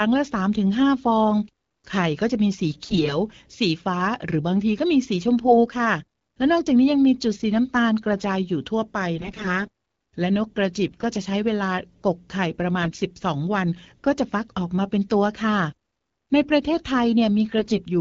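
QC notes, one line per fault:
2.85–3.15, 5.46–5.58, 9.16–9.65, 10.84–11.04, 12.82–13.01 and 17.58–17.80 s, AMR bit errors: speech turns hoarse, scratchy and gargly while pitch and level hold. Weakly protected bits in the 12.65 kbit/s AMR-WB stream arrive flipped, roughly 5 to 10 percent of bits, misplacing excitation pulses and skewing fine pitch, gain and spectral values.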